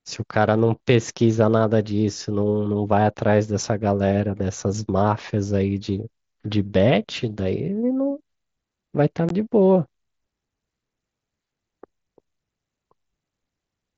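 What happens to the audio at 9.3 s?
A brief hole opens in the speech at 9.29 s: about 15 ms of sound drops out, with hard edges on either side as the voice cuts out and returns. This is unconcealed Bluetooth headset packet loss. Voice packets between headset and phone went missing, and nothing was synthesised to cover the gap. The length fits two lost 7.5 ms frames on the wideband mSBC link the clip travels over.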